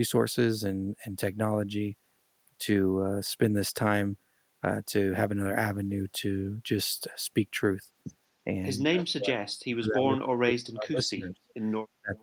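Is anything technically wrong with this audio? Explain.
Yes. From 8.85 to 11.49 s the speech dips sharply, by roughly 40 dB at its deepest, and again briefly from 12.01 to 12.16 s. This is speech suppressed in double talk, likely an echo canceller mistaking the talker for echo while both sides spoke and turning everything down. It shows as gaps and thinned upper bands on a spectrogram, collapsed envelope on the waveform.

At 12.16 s a faint delayed copy appears, about 186 ms behind and roughly 30 dB below the speech. This echo leak is likely residue the canceller failed to remove from a loudspeaker path, visible as a weak, time-shifted repeat of recent spectral patterns.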